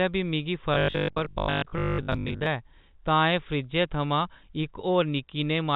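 Speech over a G.711 telephone line, capped at 4 kHz, turns to robotic sound from 0.74 to 2.46 s, right after "बी मिगी". A rigid 50 Hz buzz covers most of that stretch, likely from a repeated 20 ms buffer. Codec roughness would instead follow the level.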